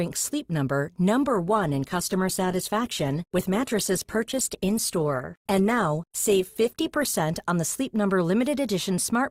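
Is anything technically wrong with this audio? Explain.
Yes. From 1.21 to 7.21 s the adaptive stream drops to a lower bitrate after the connection slows. Codec artefacts rise in the speech, suggesting a switch from about 64 to 16 kbit/s. Quality changes abruptly, without any gap.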